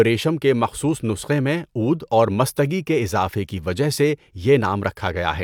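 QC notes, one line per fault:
No technical faults are audible anywhere in the recording, and the signal gives nothing that calls for a QC flag.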